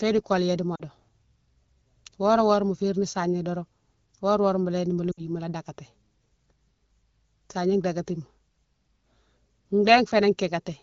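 From 0.75 to 0.83 s, and from 5.11 to 5.25 s just after "léni mola", there are lost AMR speech frames. The decoder repeated the last good pitch and vocal-tract settings at falling gain, producing brief smeared, fading dips that fit two and three 20 ms frames.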